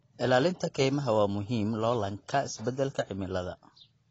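From start to finish, the speech has nothing above 7.9 kHz. It sounds dull and smeared, with a warbling fizz on sibilants and sustained sounds. The likely cause is AAC compression, where the encoder drops the top band and coarsely quantises what remains. Damage this plain fits a low bitrate around 24 kbps.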